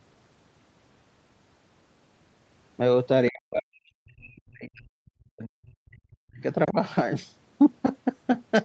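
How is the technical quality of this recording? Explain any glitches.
The recording has two dropouts. Audio tops out around 8 kHz, consistent with the call path. From 3.29 to 6.42 s the voice sinks, falling as much as about 40 dB over around three seconds, then dips again about 10 dB at 6.65 s. This is likely speech suppressed in double talk: the echo canceller, unable to separate the talker from overlapping far-end audio, turned everything down.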